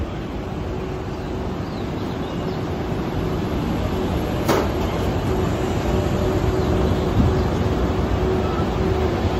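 The audio carries a burst of DAB burbling from 5.58 to 5.86 s: short blips of noise in single sub-bands over the programme. Residual bit errors, roughly 0.2 percent, slipped past error correction and corrupted sub-band samples across about a dozen MP2 frames.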